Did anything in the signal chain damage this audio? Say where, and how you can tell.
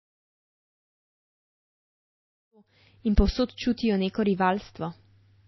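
Yes. The codec stage is the culprit, likely MP3 encoding at a very low bitrate, consistent with about 24 kbps. The speech has nothing above 5.8 kHz throughout, and weak spectral lines drop in and out frame to frame, giving a watery, swirly sound with smeared attacks.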